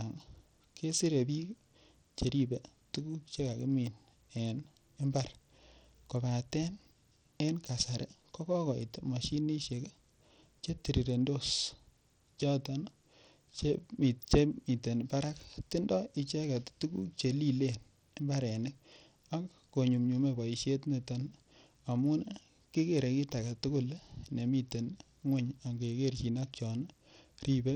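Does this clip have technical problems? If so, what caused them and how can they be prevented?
Yes. Across the whole speech clip there's a gritty, grainy edge riding on the sound, and the treble keeps thinning out and flickering in and out. That's likely Bluetooth SBC compression: a bitrate low enough to fit roughly 80 kbps leaves the upper sub-bands starved of bits, so the top end drops away while the coarse quantising of the rest adds that rough noise and aliasing. To prevent it, record over a wired connection or use a higher-quality Bluetooth codec and bitrate.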